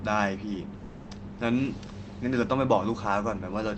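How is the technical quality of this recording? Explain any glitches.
The recording has one clear glitch, a call audio freeze from 0.85 to 1.09 s. The likely cause is packets stalling in transit so that the jitter buffer ran dry. For about 220 ms the receiver stretched the last bit of sound into a fading fill rather than silence. When the packets caught up, the speech resumed where it had stopped, with nothing lost, but everything after it lands roughly 220 ms later. The call codec's band limit, with highs cut above 8 kHz, applies throughout.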